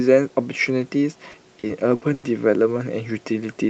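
Speech carried over a call link shows repeated packet loss (robotic sound) from 1.31 to 2.25 s: five holes, the longest 100 ms, each patched by stretching the previous sound, so about a quarter of that stretch is filled-in chop. Unlike a steady codec artefact, it comes and goes in bursts. The audio tops out near 8 kHz, consistent with Opus at around 40 kbps.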